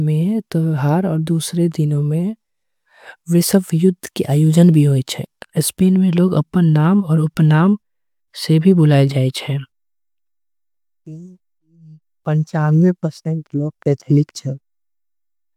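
No technical faults are audible anywhere in the speech recording.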